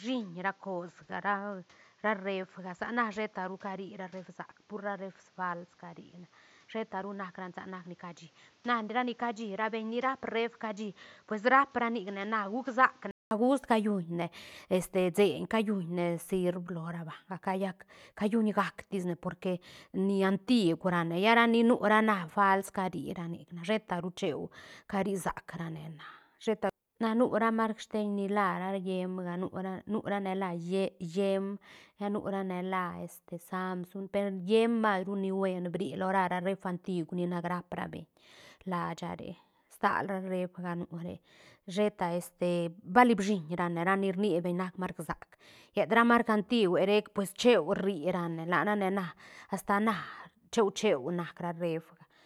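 From 0 to 13.31 s the speech sounds dull and boxy, with nothing above 7.6 kHz, a level roughly 10 dB lower and a noise floor only about 30 dB down. A 200 ms silence precedes the clearer sound, likely an input switched back from a poorer device.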